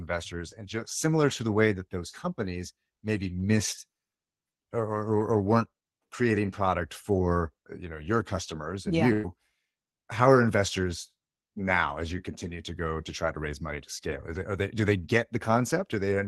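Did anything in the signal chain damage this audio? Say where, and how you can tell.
Yes, the damage happened on the network leg of the call. Right after "your customers and yeah", from 9.13 to 9.26 s, there's a burst of packet loss. About 100 ms of audio went missing in a row. The receiver concealed it by stretching the last sound and fading it down, so you hear a smeared, held tail instead of silence. Then the speech picks up a beat later, with that chunk skipped over.

Inside that same stretch, at 9.23 to 9.25 s, you get a lost packet rebuilt from error correction. The next packet carried a low-bitrate backup of that 20 ms frame, and Opus decoded it in place of the real one, so there's no hole there. It just sounds a bit rougher and grainier than the surrounding audio, which comes through the call path at 32 kbps with the usual Opus coding texture and content up to about 12 kHz.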